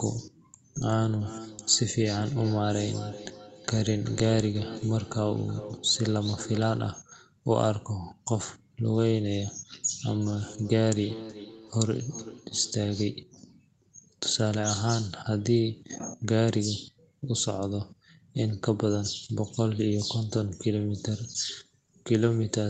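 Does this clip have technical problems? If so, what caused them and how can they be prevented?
Yes. There is feedback echo between two devices from 1.2 to 6.9 s and from 10.2 to 13.2 s. The speech returns roughly every 0.4 s, thinner each pass, peaking about 15 dB below the speech. A second device in the room replays the call, and this microphone picks it up again. To prevent it, mute or move away the other device, or have everyone in the room use headphones.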